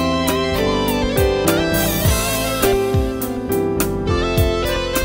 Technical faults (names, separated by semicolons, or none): none